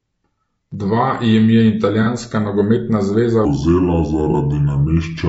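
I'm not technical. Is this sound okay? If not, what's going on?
No. Throughout the speech there is a rough, grainy quality, with a hiss between the tones of the voice and a thin, artificial-sounding top end. That is likely low-delay AAC compression, the kind used in video calls. Unlike a single glitch, this graininess never lets up.

There are two brief AAC frame losses with concealment. The first is from 2.03 to 2.08 s, between "jim je" and "nogometna zveza". The second is from 4.31 to 4.35 s. Each is a tiny smeared, noisy blip where a scrap of audio went missing and the decoder guessed at what should be there. A dropout would leave silence instead.

From 3.45 s to the end, just after "nogometna zveza", the section plays at the wrong speed, about three quarters of normal. The voice drops roughly five semitones and drags, deep and slow. The speed and pitch shift together, which likely points to playback on the wrong clock rather than someone simply speaking slowly.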